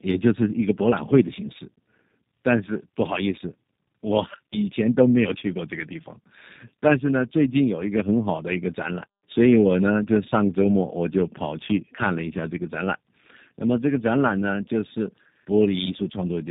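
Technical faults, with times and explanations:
Throughout, tandem speech coding: the speech passes through a low-rate speech coder twice in succession, which points to two 8 kbit/s G.729A-style stages joined by a G.711 mu-law link, and the second coder works on the first one's already damaged output. The speech sounds rougher and more warbly than a single low-rate codec would make it, with nothing above 3.7 kHz. That stacked roughness, beyond any single coder's artefacts, is what marks it as tandem coding.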